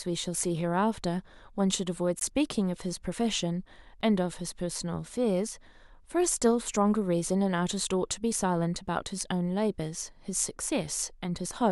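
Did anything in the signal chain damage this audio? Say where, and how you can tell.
Yes, at the driver or buffer stage. There are two blocks of digital silence, at 2.19 s (about 17 ms) and 4.01 s (about 6 ms). The speech drops to silence and returns with no fade. The second gap fits a 256-sample buffer left unfilled in time.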